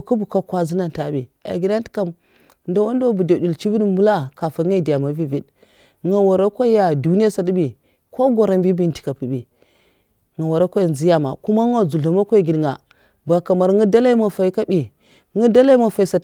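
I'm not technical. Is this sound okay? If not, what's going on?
Yes, nothing in this speech recording points to a technical problem with how the sound was captured or carried.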